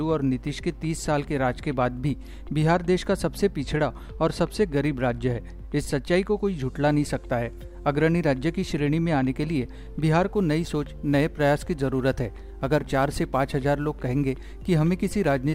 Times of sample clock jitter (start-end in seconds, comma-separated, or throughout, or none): 10.31-15.54